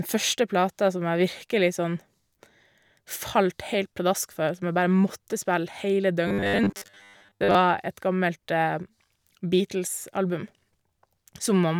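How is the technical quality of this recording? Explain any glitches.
The recording has one clear glitch, a stretch of robotic sound from repeated short buffers between 6.28 and 7.55 s, right after "bare måtte spille hele". There the speech turns into a rigid, metallic buzz pitched at 100 Hz that still roughly tracks the syllables. The likely cause is audio arriving too slowly, so playback keeps looping the last 10 ms chunk for most of that stretch while fresh audio is skipped. That fixed 10 ms repeat period is what imposes the steady 100 Hz drone.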